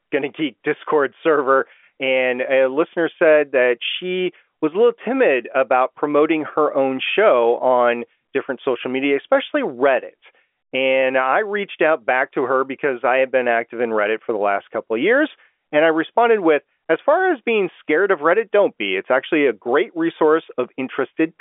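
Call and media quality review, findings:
No findings in this call and media quality review: standard G.711 telephone coding, with the speech band-limited and nothing heard above about 3.7 kHz.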